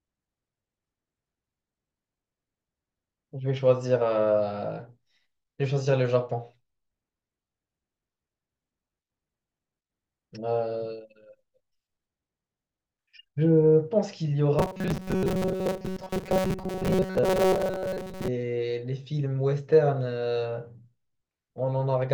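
Robotic sound from repeated short buffers, 14.59 to 18.28 s: a metallic 188 Hz buzz, likely a 5.3 ms chunk repeating over skipped audio.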